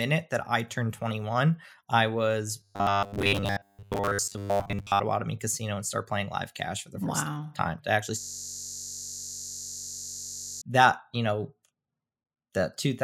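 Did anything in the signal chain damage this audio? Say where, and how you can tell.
Yes. Audio likely reached the buffer too seldom from 2.61 to 5.00 s, so 10 ms slices were repeated in place of most of the real audio. This produced robotic sound from repeated short buffers, a rigid 100 Hz buzz.

From 8.21 to 10.62 s, a system hang loop: the driver froze while the hardware kept replaying one 21.33 ms piece, which fits a 1024-sample buffer. The result is a steady 46.9 Hz buzz.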